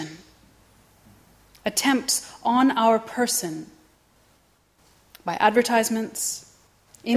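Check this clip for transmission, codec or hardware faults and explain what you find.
Checking this clip turns up no faults to explain.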